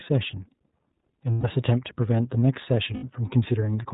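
The speech in this clip has passed through the iLBC codec, a narrowband VoIP coder that codes each frame's excitation independently. Its 30 ms framing points to the 13.33 kbps mode. Nothing above 4 kHz survives, so the speech sounds band-limited and muffled at the top, and the coding leaves a plainly audible rough, slightly synthetic grain on every voiced stretch. On top of that there are lost iLBC frames, where packets never reached the decoder and it filled the hole by repeating the last pitch cycle blended with noise. The first gap runs from 1.33 to 1.45 s, about 120 ms, which fits four missing 30 ms frames. The second runs from 2.93 to 3.04 s, about 90 ms, which fits three. Each gap sounds like a held, faintly buzzy, breathy vowel in place of the real sound. Because each iLBC frame stands alone, the speech snaps back almost immediately after both gaps.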